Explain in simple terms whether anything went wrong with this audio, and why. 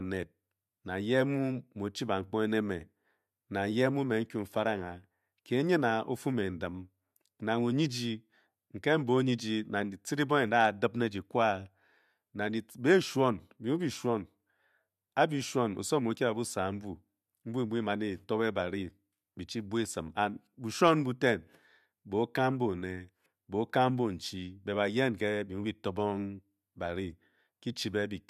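Nothing went wrong here: the speech comes through with no audible technical faults anywhere in the recording.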